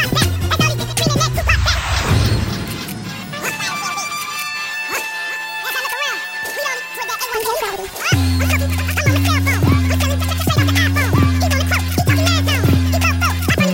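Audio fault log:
Throughout, audio read two samples at a time: sample pairs treated as single frames, so it runs at 2x speed, an octave up.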